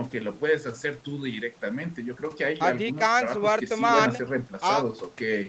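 Nothing goes wrong in this speech recording; the call processing and Opus codec leave their usual mark, with nothing above about 8 kHz, and no faults stand out anywhere.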